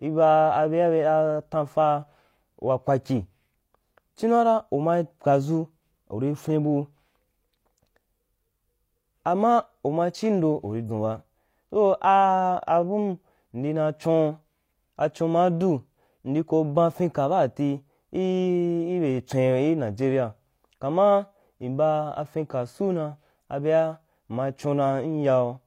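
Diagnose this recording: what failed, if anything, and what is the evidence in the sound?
At the codec stage, the compressed stream carries damaged data: a stretch of corrupted bytes that the decoder cannot parse cleanly. From 10.86 to 10.90 s the speech is broken by a brief disturbance lasting about 40 ms. Faced with invalid frame data, the decoder loses synchronisation and outputs garbage or nothing until it locks onto the next valid frame header, which produces this short artefact.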